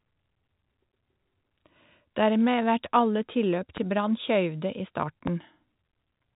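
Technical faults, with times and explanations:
3.77–3.99 s, loud pop: two sharp thumps in quick succession, peaking around 5 dB above the speech, which carries on underneath, unlike a dropout. A voltage step, likely from a plug or switch, was shaped into a pulse.
5.27–5.30 s, loud pop: a single, harder pop roughly 15 dB above the speech, likely from a static discharge.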